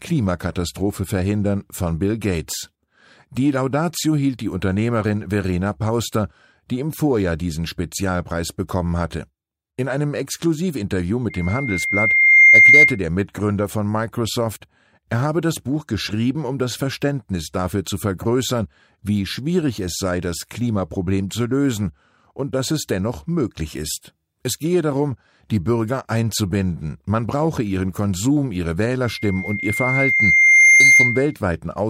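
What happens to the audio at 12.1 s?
Loudspeaker feedback squeal, 11.30 to 12.99 s: the microphone re-amplifies its own loudspeaker, so a 2.1 kHz tone swells over roughly a second, not starting steady.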